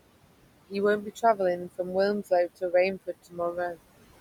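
Noise suppressor artifacts run through the whole speech clip. The suppressor pulls down every band it judges to be steady noise by about 21 dB, working frame by frame, so the room noise, which sits about 15 dB below the speech, sinks in the gaps and swells back under each phrase. On a spectrogram the noise floor appears as dark pauses speckled with isolated, twinkling time-frequency patches.

Speech cut by the noise suppressor occurs twice. From 1.02 to 1.39 s, the suppressor mistakes some quiet speech for noise and drops it by up to about 12 dB, affecting roughly a tenth of a second in total. From 2.97 to 3.57 s it bites harder, down by about 21 dB across roughly a fifth of a second. The cut speech there sounds swallowed. On a waveform the envelope caves in, and the spectrogram shows the speech energy turned down with the background.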